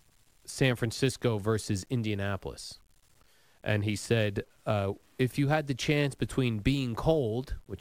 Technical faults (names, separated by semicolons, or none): low bit depth without dither; sample clock jitter